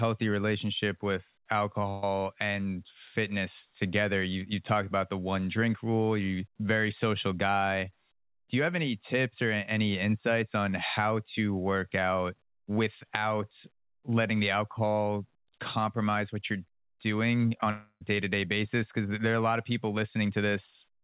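At 1.9 s, right after "relationship with", the sound is briefly smeared into a held, fading tone for about 125 ms before resuming at "and fitness together", with roughly 120 ms of speech gone. This is a burst of packet loss: several consecutive packets were lost, and the receiver stretched the last sound to bridge the gap.

From 17.47 to 17.67 s the audio turns choppy, broken by four short holes (the longest 22 ms) that are patched for about a third of that span. This is repeated packet loss: each missing packet is covered by repeating the previous sound, and the next loss follows almost immediately.

Right after, from 17.71 to 18.02 s, the last sound is drawn out and fades. About 70 ms of silence follows before the audio picks up at "to day basis", with roughly 0.3 s lost. The likely cause is a long network dropout in which nothing arrived for that stretch.

Throughout the clip, the call path passes nothing above 4 kHz, which fits a 64 kbps G.711 narrowband codec.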